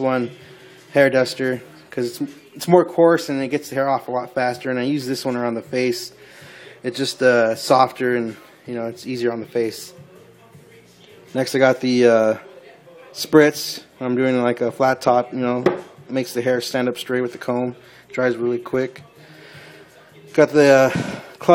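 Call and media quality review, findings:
Nothing stood out on listening.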